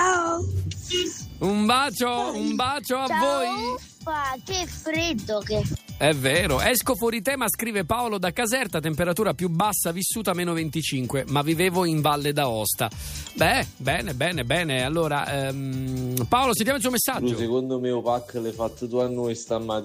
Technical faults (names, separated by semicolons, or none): none